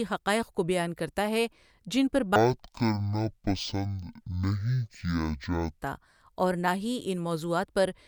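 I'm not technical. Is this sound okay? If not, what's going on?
No. From 2.36 to 5.82 s, right after "کرتا ہے جن پہ", there is a stereo read as mono fault: the two channels' samples get read as one stream. So the speech plays at half speed, dragging and a full octave deeper.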